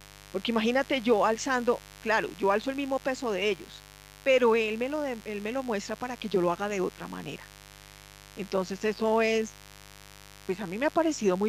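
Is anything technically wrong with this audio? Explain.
Yes, there is mains buzz throughout the whole speech clip. Sharp switching spikes from a dimmer, rectifier or unshielded path enter twice per 50 Hz cycle and spread harmonics into the kilohertz range. This gives a steady, raspy buzz roughly 25 dB below the speech. A spectrogram shows evenly spaced horizontal lines at 50 Hz multiples, and the waveform shows small regular spikes every 10 ms.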